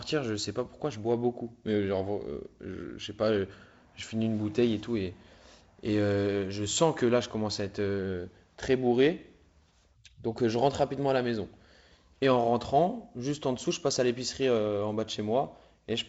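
Nothing goes wrong in this speech recording; it comes across as ordinary G.722 wideband telephone audio at what sounds like 48 kbit/s, with the faint coding grain that setting brings and the top end rolling away around 7.7 kHz, just as that path normally sounds.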